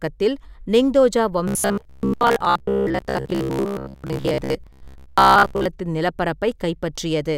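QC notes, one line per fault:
1.48–5.69 s robotic sound from repeated short buffers: the speech becomes a rigid metallic buzz at 66.8 Hz, likely from a 15 ms chunk replayed while most audio is skipped. Spectrogram shows fixed harmonic stripes; the waveform shows identical repeating cycles.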